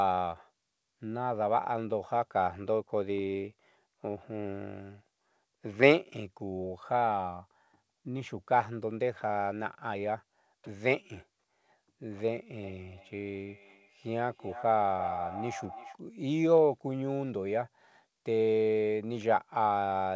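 From 12.63 to 15.98 s, a feedback echo between two devices appears. A second device in the same room replays the far end through its speaker, and the first device's microphone picks that sound up again. Its echo canceller only removes what its own device plays, so it leaves this echo in. Each stretch of speech comes back roughly a third of a second later, thinner and ringing, peaking at about 10 dB below the speech. The band stops at 8 kHz, as expected from a G.722 call path.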